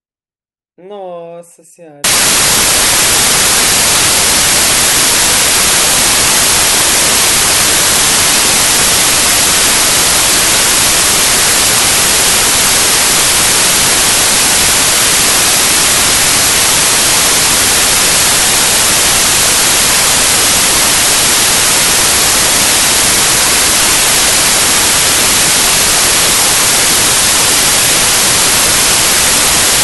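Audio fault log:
2.04–29.84 s, samples built from the wrong bytes: from here to the end the speech turns into loud, harsh broadband noise, because each sample's low, fast-changing bits have become its large part. Unlike added background hiss, the noise tracks the signal.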